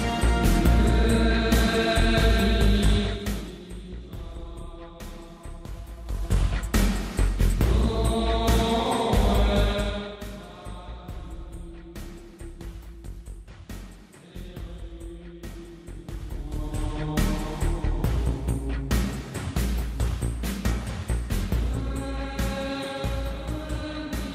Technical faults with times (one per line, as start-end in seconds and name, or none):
2.99-3.67 zipper noise